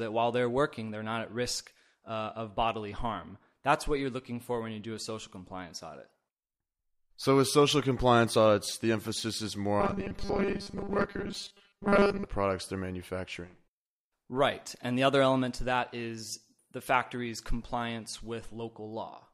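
From 9.80 s to 12.25 s the speech takes on robotic sound from repeated short buffers: a rigid, metallic buzz locked at 200 Hz that still tracks the speech contour loosely. The likely cause is audio arriving too seldom, with playback filling most of that stretch by looping the last chunk while real audio is skipped. A 200 Hz buzz fits a repeated segment of about 5 ms.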